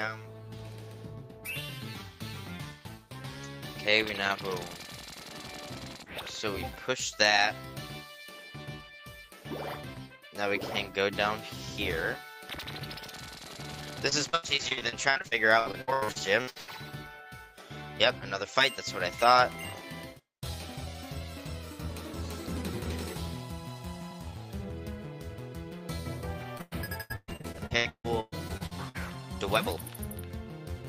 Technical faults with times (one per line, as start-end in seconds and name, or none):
14.09-16.69 repeated packet loss (robotic sound)
26.57-28.96 repeated packet loss (robotic sound)